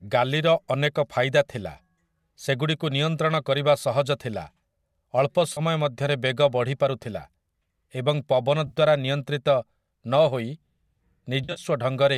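At 5.53 s the speech briefly smears into a noisy, phasey patch for about 40 ms. This is AAC frame loss with concealment, consistent with about four lost 10 ms frames that the decoder patched from the last good spectrum. Right after "ଏବଂ ପବନ", at 8.67 s, a 60 ms patch follows. From 11.44 s to 11.60 s, 90 ms of loss is scattered across 120 ms, the longest run around 50 ms, heard as a choppy, smeared stretch. The stream is likely low-delay AAC (AAC-ELD) at 64 kbps. Unlike a dropout, none of these gaps falls to silence or clicks. Each stays filled with a blurred copy of the preceding sound.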